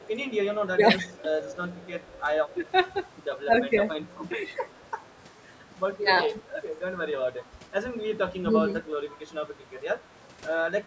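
From 0.0 to 3.44 s there is an echo leak. The loudspeaker side's echo canceller likely failed to remove everything its microphone picked up, so a faint, delayed copy of the speech trails it by 110 ms, roughly 30 dB below the direct sound.

Inside that stretch, from 0.75 to 1.49 s, speech is suppressed in double talk. With both sides talking, the canceller likely mistook the talker for echo and turned it down. The speech dips by around 15 dB for a few hundred milliseconds in total.

The same suppression returns from 2.54 to 4.59 s, this time with dips of around 10 dB.

A second echo leak follows from 4.55 to 4.89 s. Its 110 ms trailing copy is fainter still, about 35 dB down.

Further double-talk suppression dips of around 15 dB occur at 5.94 to 6.38 s. A shallower dip of about 5 dB comes at 8.45 to 8.84 s.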